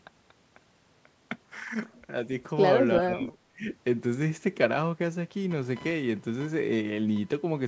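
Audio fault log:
2.99–3.68 s: speech suppressed in double talk. The talker's level dips in patches totalling about half a second, falling by roughly 25 dB at its deepest. This is likely an echo canceller that could not tell near-end speech from far-end echo and attenuated both.
5.51–7.68 s: computer activity noise. A buzzing tone pulsing at around 1 kHz sits about 20 dB below the speech and runs to the end. It comes from processor or peripheral load shifts disturbing the shared audio ground, so it follows machine activity rather than the speech.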